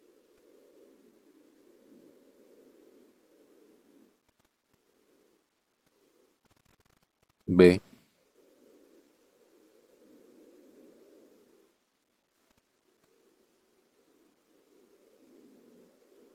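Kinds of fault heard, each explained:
Frames out of order: two neighbouring 93 ms blocks play swapped, giving a brief garbled flutter. Unlike a dropout, no time is lost.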